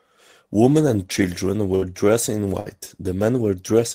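A burst of packet loss hits this speech twice, first at 1.75 to 1.85 s and again at 2.60 to 2.68 s. Each time a run of audio failed to arrive in time, and the receiver filled roughly 60 ms by stretching the last sound it had and fading it down, heard as a brief held buzz or dying hiss. Playback then jumps ahead, leaving about 60 ms of the original speech missing at each point.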